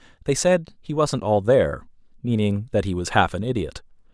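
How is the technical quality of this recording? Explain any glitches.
Nothing goes wrong technically in this speech recording, so there are no glitches to explain.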